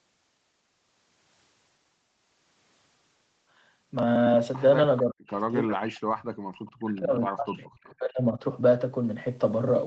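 From 5.03 to 6.29 s the speech sinks by as much as about 40 dB, about a second of it in total. The gaps follow the talking rather than falling at random, which is the mark of speech suppressed in double talk: likely both ends spoke at once, and the echo canceller, unable to tell this talker from loudspeaker echo, turned everything down. Packet-loss dropouts would instead clip short, evenly sized chunks regardless of overlap.

At 6.66 to 6.71 s a brief, faint copy of the speech surfaces about 441 ms late and roughly 30 dB below it, an echo leak that is likely residue the far end's canceller missed and sent back. Its distinct, long delay and scrap-like shape set it apart from room reverberation, which would trail smoothly right behind the sound.

The same double-talk suppression returns from 6.73 to 8.43 s, gouging about 1.5 s of speech by up to about 40 dB. The speech stays band-limited to 8 kHz by the call path throughout.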